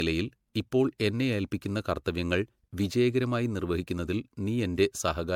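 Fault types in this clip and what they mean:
generation loss: The speech sounds swirly, smeared and hollow throughout, with blurred attacks, worse than a single MP3 pass at what sounds like 96 kbit/s would give. The likely cause is around five successive re-encodes, each adding fresh quantisation noise and spectral holes.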